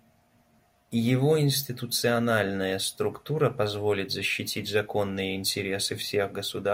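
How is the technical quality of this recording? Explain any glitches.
The signal shows no technical faults or glitches.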